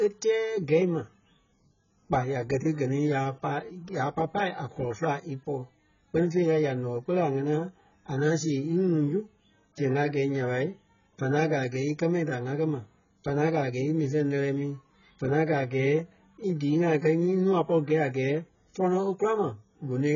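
Speech throughout with heavy AAC compression damage: nothing above 7 kHz, and sibilants turn fizzy while sustained vowels warble. A plain low-pass filter would dull the sound just as much but stay clean, without the smeared, holey texture. The likely cause is AAC-LC at a very low bitrate, consistent with about 12 kbps.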